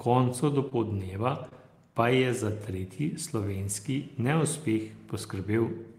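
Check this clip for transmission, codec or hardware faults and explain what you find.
Two brief dropouts of the transmitted stream show up, both short concealed packet loss, at 0.69 to 0.73 s and 1.49 to 1.53 s. Each time about 20 ms of speech failed to reach the decoder, so the receiver invented a bridge, roughly 14 ms at the first gap and 22 ms at the second, by extending the preceding sound before blending back into real audio. The result is a quick smear or wobble in the speech, and a short consonant could be lost inside it.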